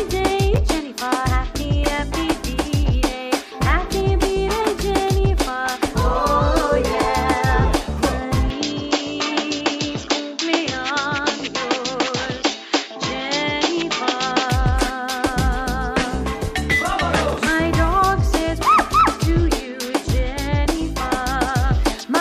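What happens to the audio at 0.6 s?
At about 0.56 to 0.58 s, two 10 ms chunks are swapped: chunks out of order, with one chunk arriving a single slot late and playing after the chunk that should follow it. No audio is lost, but the brief reversal produces a tiny jumbled stutter. On the waveform, three hard joins appear as abrupt discontinuities within that 20 ms span. On a spectrogram, they show as thin vertical broadband lines.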